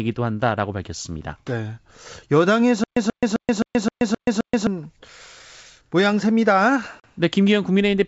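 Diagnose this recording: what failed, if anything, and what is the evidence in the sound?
Stutter with silent gaps, at the playback or buffering stage. From 2.84 s to 4.67 s the same burst of about 134 ms repeats seven times, each followed by about 128 ms of digital silence, giving an even period of about 262 ms. The likely cause is a stalled player or stream that replays its last fragment at each retry and then runs dry. On a waveform this shows as identical blocks separated by flat silent lines. A spectrogram shows matching vertical slices with black gaps. The speech that should have filled that stretch is lost.

Packet loss on an ADPCM call, at the network stage. At 7.00 s a hard-edged 40 ms hole appears, which fits around two lost packets replaced by silence. When the speech returns at 7.05 s, the decoder's adaptive predictor and step size no longer match the sender's. The waveform shows a sharp-edged flat gap followed by slightly distorted speech that settles shortly after. 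The spectrogram shows a clean dark band. Outside that damaged region, the G.722 wideband coding at 64 kbit/s stays clear up to 7 kHz.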